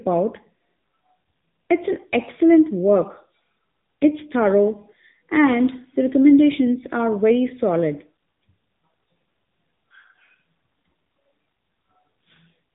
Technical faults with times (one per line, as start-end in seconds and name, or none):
0.00-12.75 AMR narrowband mobile codec